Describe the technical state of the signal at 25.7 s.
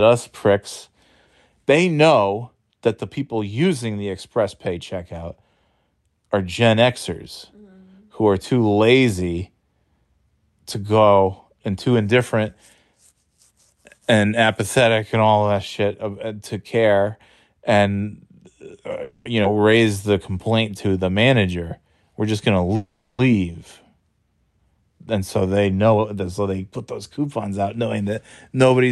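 A jitter buffer speed-up runs from 24.99 to 26.53 s, just before "put those coupons out": the receiver trimmed pitch-period slices, about a fifth of a second in all, so the speech hurries at 112% with unchanged pitch.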